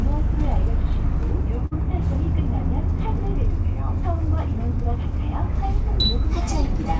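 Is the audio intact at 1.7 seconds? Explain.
No. From about 1.66 to 1.73 s there is a short stall from a late packet. The jitter buffer ran dry, so the receiver stretched the last sound for about 54 ms until the packet arrived, then resumed where it left off. Nothing is lost, but the timing slips by 54 ms and the held sound carries a faint buzz or dip. On a spectrogram this shows as a smeared, unnaturally steady band capped at 8 kHz, and the waveform shows a repeating stretch.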